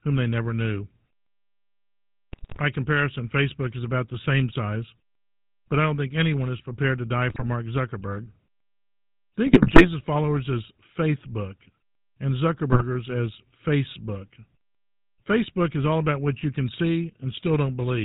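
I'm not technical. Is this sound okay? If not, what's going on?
No, it isn't. The whole clip has the sound of the GSM full-rate codec, the old digital mobile phone coding. It rebuilds the voice from a simplified model of the throat and mouth driven by a stream of pulses, and it throws away everything above 4 kHz. That's why the speech sounds buzzy and gravelly throughout and a bit muffled on the top end, and the roughness is easy to hear.

On top of that there are four short bursts of GSM bit errors, the kind you get on a weak phone signal where bits of the coded data arrive scrambled. They hit at about 2.32 to 2.61 s, 7.30 to 7.49 s, 9.46 to 9.89 s and 12.72 to 12.83 s. In each one the decoder gets garbled instructions for tone or loudness, so the voice briefly breaks into squawks, pops or gargling.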